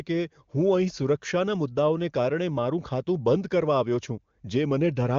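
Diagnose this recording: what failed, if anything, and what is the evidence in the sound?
Nothing failed; the wideband codec path carries it faithfully.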